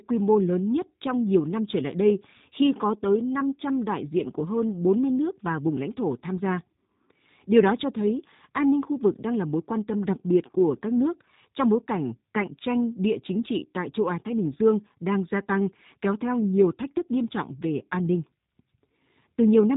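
Speech runs through the G.729 codec for its whole length, and the damage is plainly audible. Nothing above about 3.8 kHz survives, so the sound is narrowband and dull. The codec models each short frame as a vocal tract filter plus a pitch predictor and a handful of excitation pulses rather than keeping the waveform, so the speech comes out rough and slightly synthetic. That sparse rebuild fits an 8 kbit/s G.729A encode.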